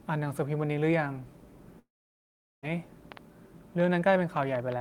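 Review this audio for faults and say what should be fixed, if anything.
There is a long network dropout from 1.79 s to 2.65 s. About 0.84 s of speech never arrives. The receiver stretches the last sound into a buzz that fades away. Then about 0.76 s of plain silence follows. The speech resumes afterward, but the lost portion is gone. The likely cause is a stall in packet delivery. Prevent it with a steadier network path, a larger jitter buffer, or redundancy and retransmission for lost packets.

A train of clicks runs from 3.12 s to the end of the clip. The pulses arrive at about 6 per second. Their spacing is uneven. They sound much alike and sit around 10 dB above the speech. They tick over the pauses as well as the speech. This most likely comes from electrical interference or a faulty connection or power supply. Prevent it by moving or shielding nearby equipment and checking the cabling and power supply.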